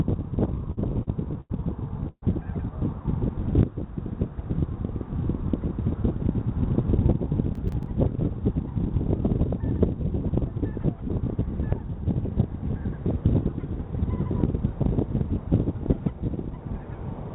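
From 0.54 to 1.52 s the sound drags and stutters through five short held-over stretches, the longest 89 ms. This is repeated stalls (stutter): late packets kept emptying the jitter buffer, and about 217 ms was filled in.

At 2.08 to 2.24 s the sound hangs as a fading continuation, then 60 ms of silence, before resuming. This is a call audio freeze, likely from packets held up in transit, which added about 143 ms of delay.

Between 5.17 and 6.21 s the audio runs slightly hurried at unchanged pitch, about 106% speed. This is jitter buffer speed-up: the receiver trimmed roughly 70 ms of pitch periods to cut excess buffered delay.

From 7.55 to 7.86 s a gritty crackle rides on the sound. This is processor overload crackle: around seven buffers of about 10 ms missed their deadlines and replayed old audio with hard edges.

Throughout, the G.711 A-law call path limits the band to nothing above 4 kHz.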